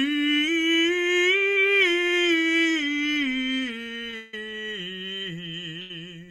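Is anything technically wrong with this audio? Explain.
Yes, the music has timing faults. At 4.10 s and again at 5.81 to 5.91 s there is a short stall from a late packet: the jitter buffer ran dry, so the last sound is held for about 26 ms and then 87 ms before continuing. A spectrogram shows flat, smeared columns there. From 4.16 to 4.34 s a call audio freeze stretches the sound into a fading buzz for 170 ms without reaching silence, likely from packets delayed in transit. The waveform shows a repeating, decaying pattern before the music resumes unbroken.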